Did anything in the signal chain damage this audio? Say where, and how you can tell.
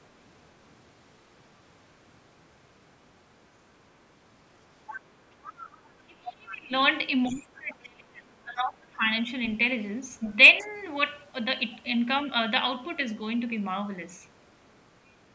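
Yes. Call processing's echo canceller likely left residue: the other side's voice leaking through at 4.87–5.01, 5.45–5.88 and 7.25–7.41 s, about 15 to 25 dB below speech.

Speech suppressed in double talk: the canceller likely ducked the talker along with the echo while both talked, dropping the talker by about 30 to 35 dB at 5.93–6.73 and 7.29–9.05 s.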